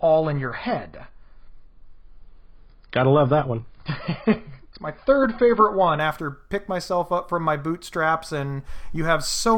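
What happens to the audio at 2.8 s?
Adaptive stream starting at a low bitrate, 0.0 to 6.0 s: a low-quality startup encode cuts everything above 5.2 kHz, then improves gaplessly at 6.0 s, unlike a rebuffer.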